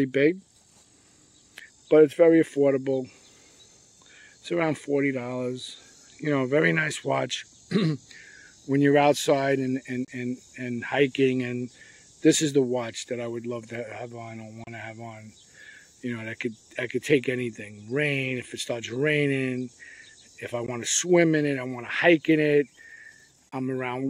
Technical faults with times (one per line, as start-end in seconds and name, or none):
10.05-10.08 Bluetooth dropout
14.64-14.67 Bluetooth dropout
20.66 Bluetooth dropout
23.49-23.52 Bluetooth dropout